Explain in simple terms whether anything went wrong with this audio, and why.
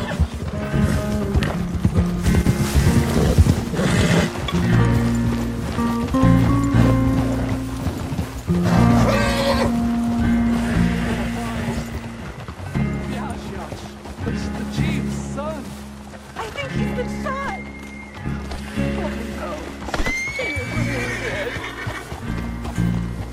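Something went wrong, briefly. From 2.42 to 2.47 seconds, the sound suddenly dips and then snaps back. The likely cause is one channel dropping out. One side of the stereo signal vanished for that instant, so the combined sound lost its share.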